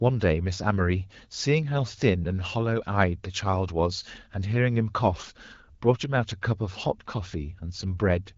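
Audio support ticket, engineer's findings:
Findings: no fault found in this speech clip, with the AMR wideband (HD Voice) codec path working as expected.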